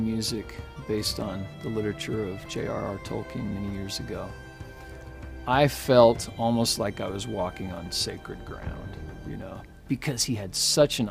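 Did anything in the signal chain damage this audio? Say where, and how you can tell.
No, nothing along the chain seems to have touched this one, since no stage has left any damage you can pick out by ear.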